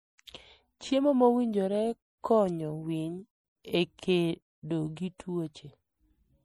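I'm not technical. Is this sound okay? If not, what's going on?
No. The whole recording has a watery, swirly quality, and the s sounds turn metallic and chirpy. That is the sound of MP3 compression, likely squeezed hard to save space, so detail gets thrown away.

There is also pre-echo, at 4.96 s and again at 5.18 s. Just before a sharp sound starts, a brief hiss creeps in early. The compression smears its noise backwards into the quiet moment, so those starts sound soft instead of crisp.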